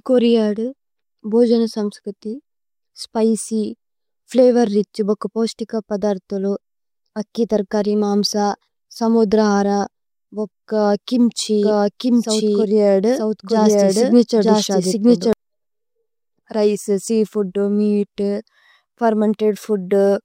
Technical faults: doubled audio track

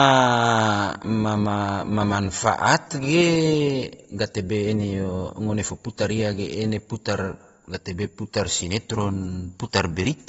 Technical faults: AAC compression

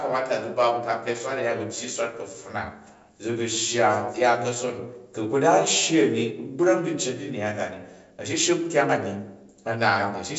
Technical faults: none

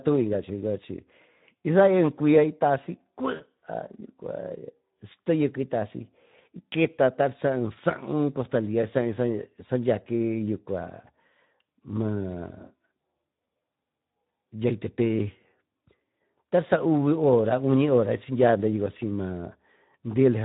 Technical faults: Speex codec; VoIP packet loss concealed by the speech codec

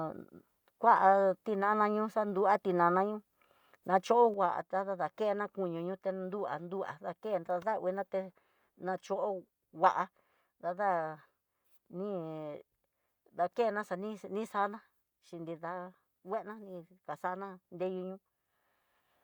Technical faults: one channel drops out

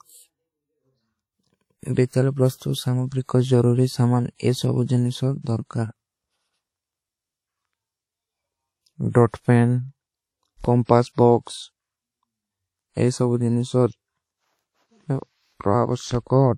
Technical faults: WMA compression; DC step

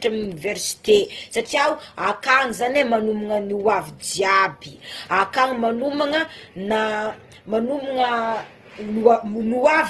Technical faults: Opus compression

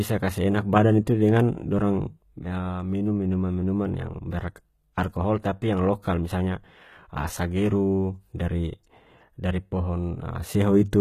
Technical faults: HE-AAC compression; pre-echo

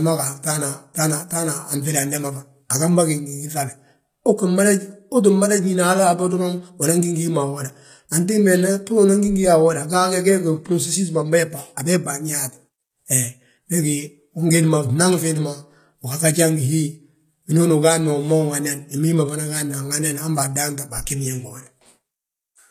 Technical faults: HE-AAC compression; pre-echo

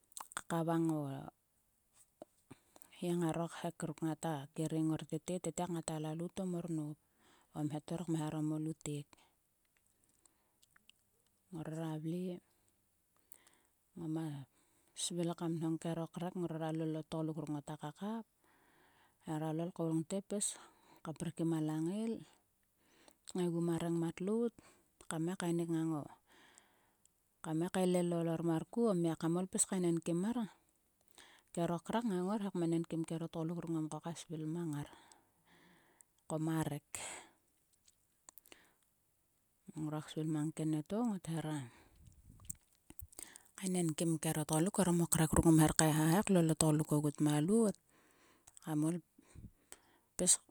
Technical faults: none

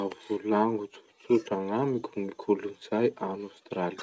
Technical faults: none

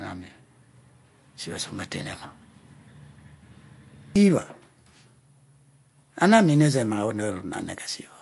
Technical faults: MP3 compression

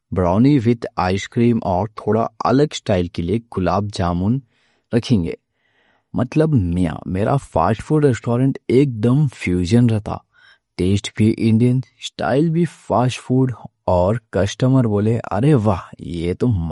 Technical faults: MP3 compression

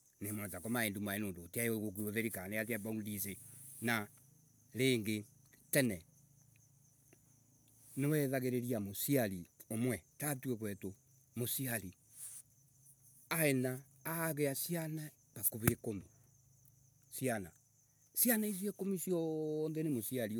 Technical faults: none

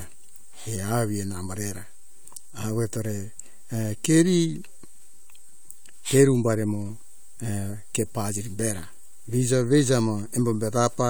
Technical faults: DC offset

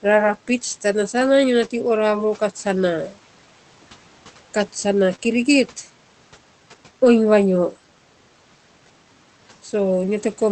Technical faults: short concealed packet loss

